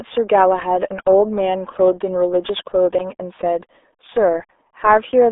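From start to finish the speech carries the signature of the RealAudio 14.4 codec, the RealAudio 1 format built for dial-up links. The band is squeezed to roughly 300 Hz to 3.6 kHz, with nothing above 3.7 kHz, so sibilants and consonant detail vanish and the sound turns muffled. Coding damage is heavy: vowels come out gargly and smeared, consistent with a bitrate around 8 kbit/s leaving far too few bits to model the waveform.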